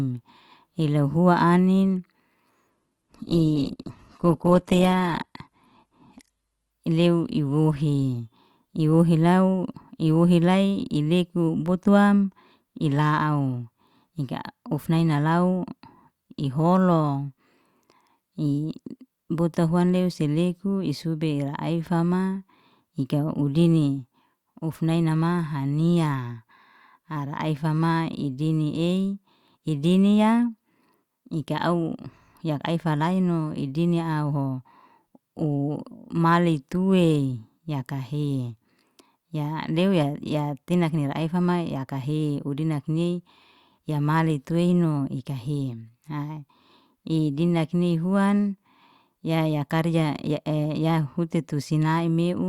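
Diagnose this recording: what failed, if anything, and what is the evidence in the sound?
Network stage: an adaptive stream at a lower bitrate, from 2.70 to 6.70 s. The speech abruptly loses its top end, with nothing above 12.5 kHz, and there's no gap at either edge. That fits the player switching from about 64 kbit/s Opus to a 12 kbit/s version while the connection slowed.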